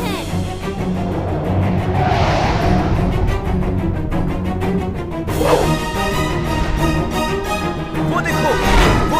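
No technical faults are audible.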